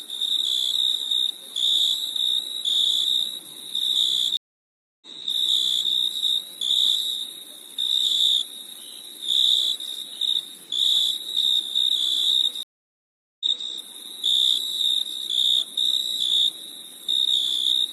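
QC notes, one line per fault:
4.37 to 5.90 s, stream reconnect: the audio drops out for about 0.65 s, then resumes roughly 0.88 s earlier, so a short stretch repeats, with a soft fade-in as it returns. The connection broke and a fresh decoder restarted mid-stream from a resent burst.
12.63 to 13.69 s, stream reconnect: a silence of about 0.77 s, after which the audio picks up roughly 0.28 s earlier and briefly replays, fading in as it enters. Again the link dropped, the player reconnected, and the new decoder started cold.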